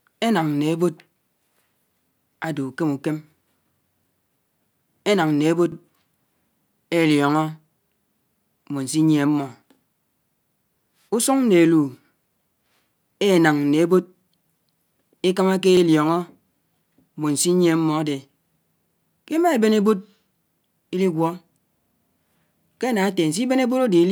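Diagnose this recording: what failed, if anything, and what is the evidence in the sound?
Overlapping chunks in the chunked processing or buffer stage: at 5.72 to 5.77 s and again at 15.77 to 15.82 s, a 50 ms slice of speech plays twice, heard as a brief stutter. The joins sit 10 s apart, so each new chunk restarts 50 ms before the previous one ended.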